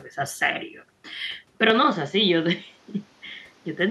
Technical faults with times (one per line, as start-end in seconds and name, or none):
1.07 lost LE Audio frames
1.70-3.90 input switched to a poorer device
3.27-3.30 lost LE Audio frames